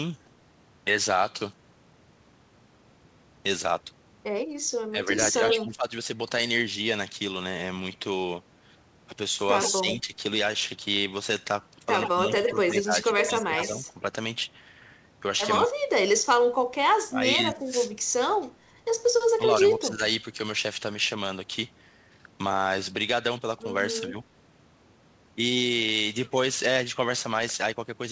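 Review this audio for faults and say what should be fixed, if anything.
Speech suppressed in double talk occurs at 4.91 to 5.87 s, 9.7 to 10.14 s, 12.13 to 14.09 s and 15.68 to 20.03 s. The speech dips by roughly 10 to 15 dB, reaching about 30 dB in the last stretch. The likely cause is an echo canceller ducking both talkers during overlap. Better double-talk detection and a milder suppressor setting would prevent this.

An echo leak appears at 5.23 to 5.57 s, 9.61 to 9.72 s and 12.01 to 13.67 s. A delayed copy of the speech returns about 120 ms late, only about 5 dB below the original. It is likely far-end loudspeaker pickup that the canceller missed. Stronger echo cancellation or a headset at the far end would prevent it.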